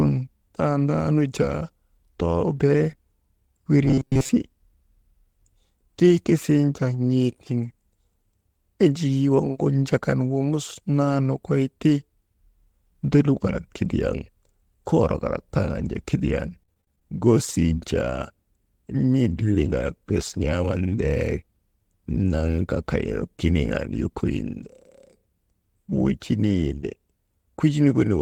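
From 3.85 to 4.29 s, robotic sound from repeated short buffers: a rigid 133 Hz metallic buzz, likely a roughly 7.5 ms buffer replayed through most of the span.

From 16.47 to 17.19 s, right after "koorok kalak tanju kidiyan", repeated packet loss (robotic sound) leaves seven choppy holes, the longest 28 ms, patched by continuing the preceding sound.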